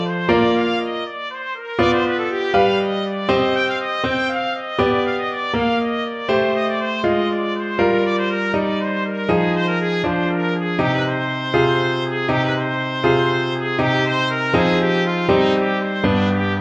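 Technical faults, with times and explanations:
No technical faults can be heard in this recording.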